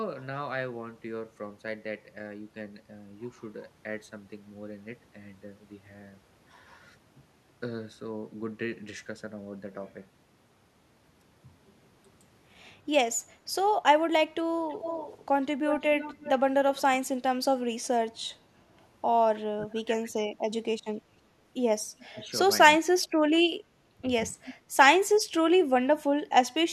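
Speech recording with two kinds of echo-control fault in its second half. Speech suppressed in double talk shows up four times: a brief dip of about 10 dB at 13.26 to 13.39 s, the deepest and longest at 19.43 to 20.46 s (about 25 dB down for roughly a second), a shallow dip of about 5 dB at 22.01 to 22.24 s, and about 15 dB at 23.65 to 24.03 s. In each, the level drops while the far side is also talking, likely because the echo canceller mistook overlapping speech for its own loudspeaker echo and attenuated everything. Echo leak appears from 14.69 to 16.82 s as a delayed copy trailing the speech by 331 ms, about 10 dB below it. A fainter copy follows at 21.99 to 22.28 s, 403 ms late and about 25 dB down. That residue likely comes from a speakerphone whose canceller failed to remove all of the microphone pickup and sent it back.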